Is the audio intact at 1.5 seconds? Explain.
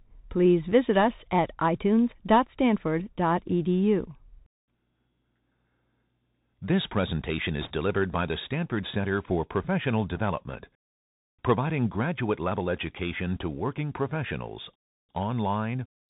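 No. At 1.5 s, as across the whole clip, the speech carries Bluetooth CVSD headset codec damage: each sample is a single up-or-down step whose size adapts, which fits a 64 kbit/s stream. Nothing passes above 4 kHz, s sounds turn scratchy, and granular hiss sits underneath.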